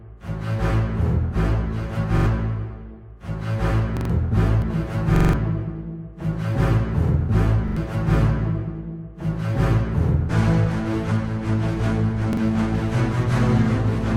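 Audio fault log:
2.18–2.26 s, 3.97–4.10 s, 5.16–5.33 s, 7.68–7.77 s, 12.33–12.37 s: repeated buffer. Fresh audio arrived late, so the device replayed its last block of about 43 ms, which fits a 2048-sample buffer, one to four extra times. Each event is a short stutter with hard joins, and up to about 0.15 s of the sound is skipped.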